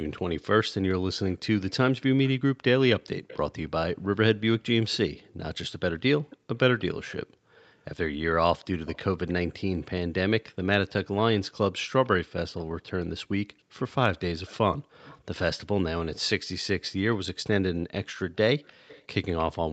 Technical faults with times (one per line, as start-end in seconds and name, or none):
0.16-4.97 echo leak
6.30-7.63 echo leak
12.05-12.09 echo leak
13.59-15.20 echo leak
18.65-19.43 echo leak